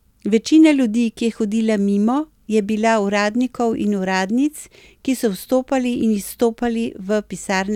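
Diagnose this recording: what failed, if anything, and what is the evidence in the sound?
Nothing failed; no faults heard.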